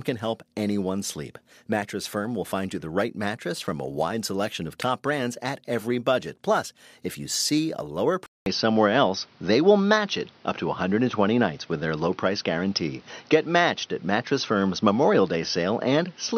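Dropped samples at 1.74 s, just after "can help anyone sleep", and again at 7.58 s, between "if you" and "a lower", each produce a single sharp click. A fraction of a millisecond of the stream has likely gone missing, so the waveform leaps straight from one value to a later one. The gap is far too brief to erase any speech, leaving only that abrupt step.

Input switched to a poorer device at 8.26 s, right after "a lower", and the change lasts to the end of the clip. A 200 ms silence marks the switch. After it, the band is narrower, so the speech turns dull and boxy. The level shifts by about 5 dB, and a new background noise sits about 35 dB below the speech. This is likely the recording changing over mid-take to a narrower-band microphone or headset path.

Dropped samples strike once more at 14.62 s, giving another isolated click.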